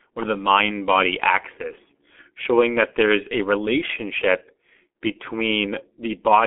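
Throughout, the speech carries heavy G.723.1 codec damage, consistent with roughly a 6.3 kbit/s stream. Its slow 30 ms frame model blurs consonants into a muffled, hoarse texture. A spectrogram shows energy confined to about 250 Hz–3.4 kHz, blank above 3.8 kHz, with smeared, blocky fricatives.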